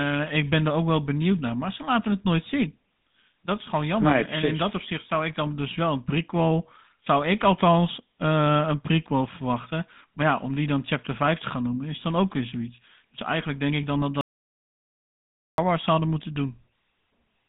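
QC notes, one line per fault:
throughout: GSM full-rate codec. The speech has a buzzy, gravelly roughness that stays plainly audible from start to end, and the band runs only from about 150 Hz to 3.7 kHz with nothing above 3.8 kHz. The coder rebuilds each short frame from a vocal-tract model fed by a sparse, regularly spaced pulse train, so fine detail in the excitation is lost and replaced by that grainy texture. The sound fits a 13 kbps GSM full-rate coder.
14.21–15.58 s: audio dropout to silence. Right after "denk ik dan dat" the speech cuts off mid-flow and about 1.37 s of silence follows. There is no room tone or line noise in the gap, so the signal was not merely quiet; the input was lost while recording carried on writing silence, likely through a disconnected device, a dropped link or a brief mute. Whatever was said during that stretch is gone, and the speech resumes abruptly at 15.58 s.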